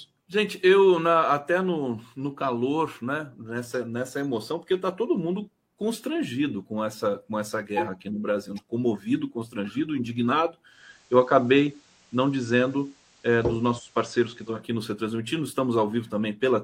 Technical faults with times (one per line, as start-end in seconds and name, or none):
10.65-14.65 digital radio blending to analogue